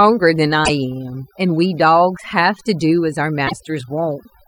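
A speech recording was run through noise reduction set far too strong, an overdone noise removal that pulls individual frequency bands down whenever they sit near the estimated noise floor. The background drops and breaks up into twinkling specks, and quieter parts of the voice vanish with the noise. Twice the compressed stream carries damaged data, so the decoder misreads frames and must resynchronise on the next header. Each is heard as a brief glitch, from 0.62 to 0.70 s and from 3.44 to 3.53 s.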